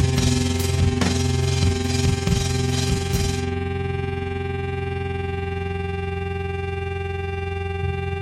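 Throughout the music, overlap-add ripple is heard. Frames rejoin with uneven gain. The level swells and dips about 6 dB, roughly twenty times a second, giving a rough flutter.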